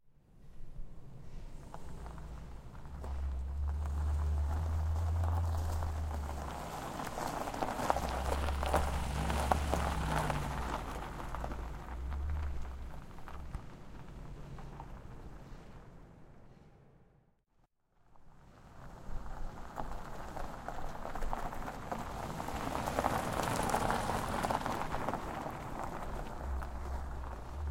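A recording of sounds, with no technical fault to be heard anywhere in it. There is nothing in the audio that calls for a time or a cause to be pointed out.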